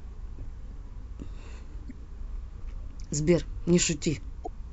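At 1.87 s and again at 4.43 s, the speech breaks into a short glitch lasting about 44 ms. Both are damaged data in a compressed stream. Corrupt bytes made the decoder misread frames and lose sync until it found the next valid header.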